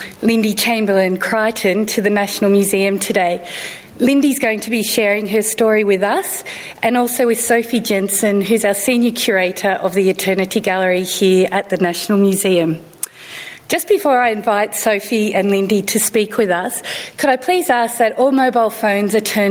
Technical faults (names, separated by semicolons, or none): gain pumping